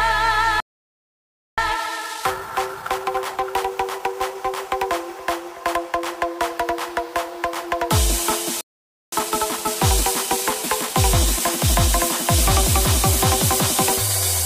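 At 0.60 s the sound cuts out dead and stays silent until 1.58 s, just under a second. That's a playback stall, most likely the player running dry of data or its thread getting blocked, and the audio picks up again after the gap. From 1.58 s to 4.58 s you get the time-compressed catch-up: the player trims tiny slices and cross-fades them to clear its backlog, so everything runs about 1.15 times fast at normal pitch. The same pair repeats later. A shorter stall, about half a second, drops the sound from 8.61 s to 9.12 s, then another 1.15× catch-up hurries things along from 9.12 s to 12.12 s.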